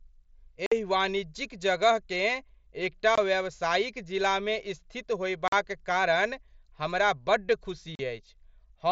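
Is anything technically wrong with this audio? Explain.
Yes. Unconcealed Bluetooth headset packet loss cuts four holes: 0.66 to 0.72 s (52.5 ms, just before "एहि वाणिज्यिक"), 3.15 to 3.18 s (22.5 ms), 5.48 to 5.53 s (45 ms, between "एकटा व्यावसायिक जिलामे स्थित" and "कारण हमरा बड्ड"), and 7.95 to 7.99 s (37.5 ms, after "कारण हमरा बड्ड"). Packets on the headset link went missing and nothing filled them. The lengths are multiples of 7.5 ms, which fits whole mSBC frames. Each gap is a sudden dropout with abrupt edges. On a waveform it is a flat stretch with sharp edges, and on a spectrogram a clean vertical blank band cutting through the up-to-8 kHz wideband speech.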